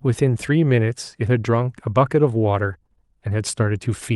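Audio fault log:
No fault is heard anywhere in this speech clip. It has passed through a WebRTC call path, and the top of its spectrum stops at about 12 kHz, which fits the Opus codec at a moderate bitrate such as 48 kbps.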